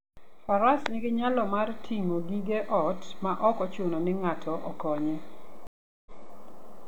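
At 5.67 s, right after "ochuno ni ng'ato okonye", the speech drops out into about 0.39 s of silence. It picks up again by 6.34 s at a point roughly 0.28 s earlier, so a short stretch is heard twice, with the restart fading in. This is a stream reconnect: the connection failed, the player reconnected and started a fresh decoder partway through the stream, and the server resent a burst from slightly before the break.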